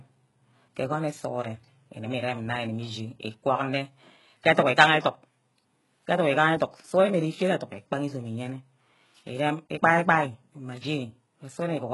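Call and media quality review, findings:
HE-AAC compression, throughout the speech. Symptom: gritty, metallic, lispy s sounds; treble not natural, nothing above 11.5 kHz. Likely cause: HE-AAC at a very low bitrate, near 12 kbps, rebuilding upper band by copying lower bands. Unlike plain low-pass or MP3 loss, top end present but synthetic, harmonics misaligned.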